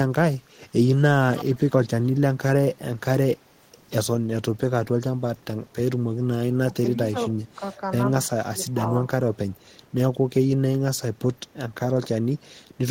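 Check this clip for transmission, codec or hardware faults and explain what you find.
Two kinds of fault are present: a brief echo leak near the start and three short stretches of speech suppressed in double talk later on.

From 1.36 to 1.63 s, a faint, delayed copy of the speech trails behind it, arriving about 324 ms late and sitting roughly 15 dB below the direct voice. This is an echo leak, likely from a far end playing the call over a loudspeaker, where the echo canceller left part of the microphone pickup in place and sent it back down the line.

At 6.68 to 6.74 s, 6.94 to 7.17 s and 8.4 to 8.82 s, the speech sags in level and then recovers. The first two dips are around 10 dB and the last is deeper, around 15 dB. This is speech suppressed in double talk. With both ends active at once, the echo canceller likely failed to separate the local talker from loudspeaker echo and attenuated everything, taking the wanted speech down with it.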